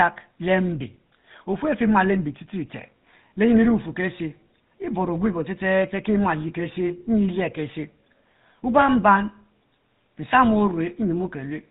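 From start to finish the speech carries the signature of the GSM full-rate codec, with damage plainly audible. The vocal tract is modelled and then re-excited by evenly spaced pulses built from a thinned-out excitation, so the voice comes back buzzy and gravelly, with a bitrate that fits about 13 kbps. Nothing survives above 4 kHz. A plain telephone band-limit would sound muffled but smooth; here the grainy, rasping texture inside the band marks the codec.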